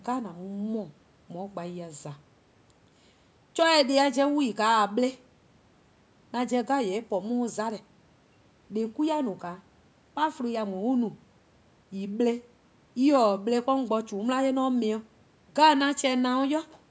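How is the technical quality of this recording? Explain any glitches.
No glitches or faults are audible.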